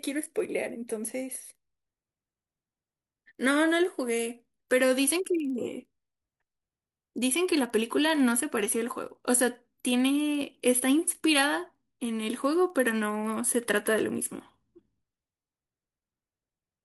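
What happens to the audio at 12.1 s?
At 12.1 s the speech carries a steady 20 Hz buzz from the resampler restarting on every block, a fault that runs through the whole clip. The converter processed each 50 ms block in isolation, consistent with upsampling 24 kHz material to 48 kHz, so every block edge gets a small error. Unlike mains hum, the buzz disappears in pauses, and unlike buffer underruns it leaves no gaps, only evenly spaced ticks.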